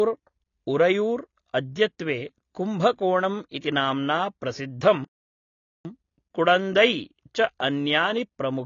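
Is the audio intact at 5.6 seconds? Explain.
No. At 5.6 seconds the audio is inside a gap of silence. It runs from 5.04 to 5.85 s, about 0.81 s. This is a playback stall. The sound stops in mid-flow and then resumes. The likely cause is that the player ran short of data, or its output thread was held up. Nothing reached the output until it recovered. The result is a clear dropout in the middle of the speech.

The moment also carries AAC compression, which runs through the whole clip. Its damage is plainly audible. Nothing is present above 6.9 kHz, so the speech sounds dull and lacks its top end. The likely cause is AAC-LC encoding at a low bitrate, which fits roughly 24 kbps. At that rate the encoder discards high bands and quantises the rest coarsely. That leaves a smeared, band-limited sound.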